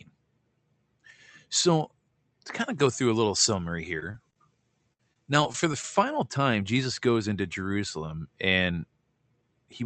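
It's a speech recording, and from 2.59 to 5.95 s the pre-emphasis was left on. The treble boost that should have been undone on playback stayed in. The tilt matches the 75 µs FM curve, with about 13 dB more at 10 kHz than at 1 kHz, so that stretch turns thin, hissy and sharp on sibilants. The call codec's top end still stops at 8 kHz, consistent with Opus at moderate bitrate. Inside that window you also get repeated packet loss, the robotic kind. The first burst runs from 3.99 to 4.38 s and is made of a few very short holes, each around 20 ms at most. The second runs from 4.93 to 5.84 s and has more gaps, the longest about 60 ms. Each hole gets papered over by stretching the last bit of sound, so those spots come out choppy with small pieces missing.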